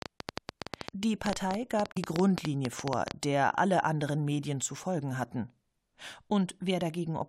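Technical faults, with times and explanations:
0.02–3.12 s, train of clicks: about 30 same-shaped pops at an irregular 9.6 per second, around 20 dB above the speech and present in pauses too, likely from interference or a faulty connection or supply.
1.92–1.97 s, damaged data in a compressed stream: a single 0.05 s disruption where the decoder misread or rejected frames and lost sync, unlike the repeating, uniform clicks.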